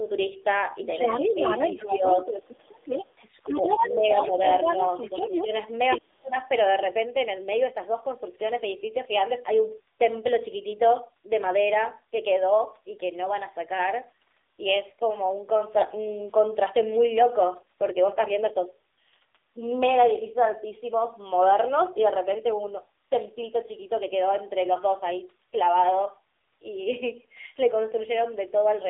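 Throughout, the speech passes through the AMR narrowband mobile codec. Everything is squeezed into a roughly 300 Hz to 3.7 kHz line band, and a pulse-driven vocal-tract model rebuilds the voice. The plainly audible buzzy, synthetic edge points to one of the codec's lower bitrates, around 7.4 kbps.

From 1.34 s to 6.35 s there are repeated dips that sound like speech suppressed in double talk. The likely cause is an echo canceller that cannot separate the talker from the far end and attenuates both. The dips are at 1.34 to 1.40 s (shallow, about 5 dB), 1.84 to 2.03 s (about 10 dB), 3.45 to 4.38 s (about 15 dB), 5.22 to 5.52 s (about 5 dB) and 5.97 to 6.35 s. The last is nearly a dropout, about 40 dB down.

Overlapping these, from 3.48 to 5.44 s, the other side's voice leaks through at roughly the talker's own level. This likely comes from loudspeaker pickup that the echo canceller failed to remove, so a second voice competes with the talker.

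At 22.40 to 22.52 s, AMR bit errors corrupt the weakly protected bits in what sounds like about four frames. The pitch and level hold, but the voice briefly turns hoarse and gargly.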